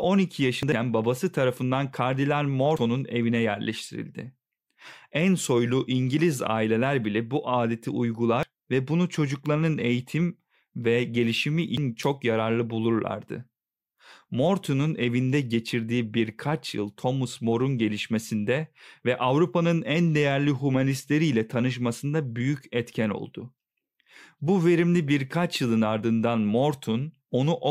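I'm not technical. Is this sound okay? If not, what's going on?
No. Compressed frames are skipped at 0.63, 2.77, 8.34 and 11.68 seconds. Short bits of speech vanish, and the audio jumps ahead each time.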